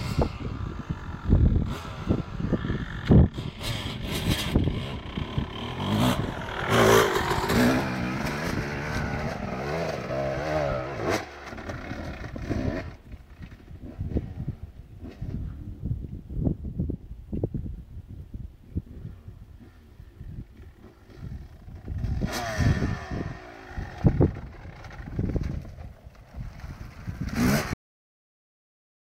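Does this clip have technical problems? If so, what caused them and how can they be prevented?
Yes. The clip has a cut-off end. At 27.73 s the sound stops abruptly in the middle of an event. There is no fade or natural decay. The audio drops straight to digital silence, which lasts about 1.4 s until the clip ends. The final buffers of audio were never written to the file or sent to playback. The recorder or encoder was likely closed before its queue had flushed. To prevent this, let every pending buffer drain before stopping and closing the file.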